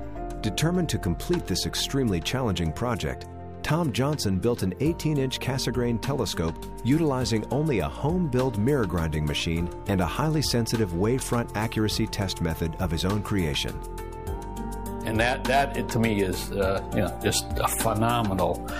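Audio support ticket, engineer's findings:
No audible transport or playback fault found on review. Nothing in the signal path calls for further action.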